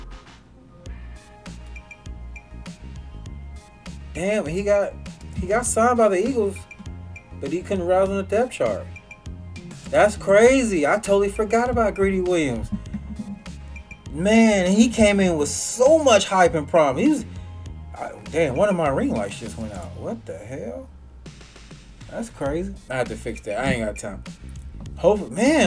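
No technical faults are audible.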